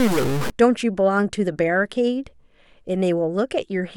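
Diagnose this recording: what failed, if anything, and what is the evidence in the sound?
For the first half second, 0 to 0.5 s, the speech carries a harsh, buzzy distortion layered over it, and the gaps between sounds are filled with a gritty noise floor instead of silence. This points to a stuck bit, likely at the converter or on a data line. One bit held at a fixed value shifts about half the samples by a step of roughly -20 dBFS, so the error follows the waveform and flips around zero during quiet passages.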